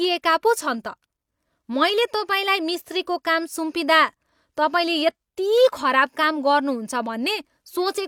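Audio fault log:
No faults detected anywhere in this speech recording.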